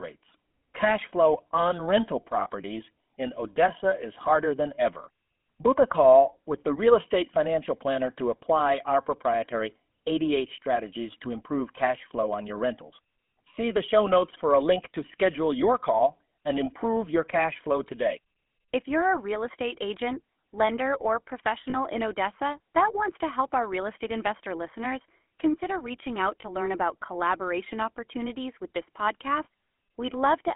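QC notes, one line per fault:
Throughout: GSM full-rate codec. The speech is confined to a telephone band of 200 Hz to 3.4 kHz and has a plainly audible buzzy, gravelly roughness. The codec rebuilds the voice from a vocal-tract model driven by sparse regular pulses, which fits 13 kbps full-rate coding.
2.40–2.48 s, 21.70–21.75 s, 26.42–26.45 s, 29.44–29.47 s: lost GSM frames. Each gap is briefly replaced by a rough metallic ring. The decoder repeats the last good frame's settings to fill the hole. The gaps fit three, two, one and one lost frames.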